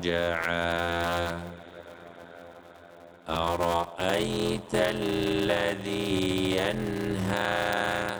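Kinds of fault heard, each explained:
Block size mismatch (padded): each 512-sample block is only partly filled before zeros, giving an 86.1 Hz buzz; the waveform shows regular gaps and the spectrogram shows vertical stripes, with playback at 0.625 speed.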